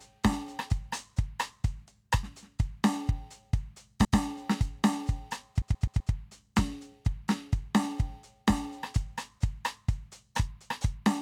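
Music with repeated frames: at 4.05 s a 128 ms chunk plays twice, and from 5.62 to 6.13 s one 128 ms chunk loops four extra times, a stutter. The same compressed data was decoded again, stretching the track by 0.64 s overall.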